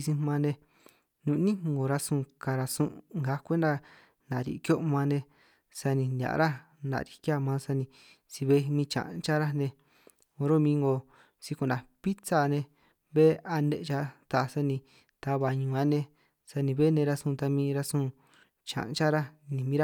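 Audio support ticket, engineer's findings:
Listened through the speech recording and there's nothing here to chase, so no findings to log on this one.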